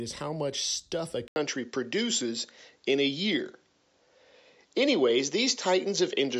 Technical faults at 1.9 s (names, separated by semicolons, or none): input switched to a poorer device